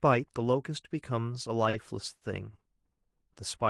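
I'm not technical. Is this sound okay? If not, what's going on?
No. There are two short stalls from a late packet, at 1.69 to 1.76 s and 2.15 to 2.24 s. The speech briefly holds the same sound for about 40 and 60 ms while waiting, then carries on. Unlike a dropout, nothing is skipped; the speech just hangs for a moment.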